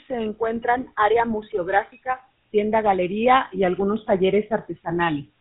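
Speech run through a GSM full-rate codec from start to finish, at a rate the sound fits to 13 kbps. Coarse pulse-driven excitation leaves a plainly audible buzzy, gravelly roughness, with nothing passed above 4 kHz.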